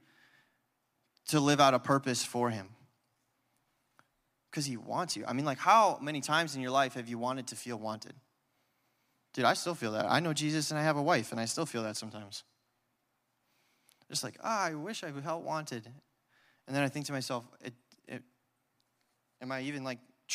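Speech carrying sample clock jitter throughout: timing wobble of a few microseconds adds roughness some 30 dB down that swells on loud, bright sounds and disappears in pauses, unlike a steady noise floor.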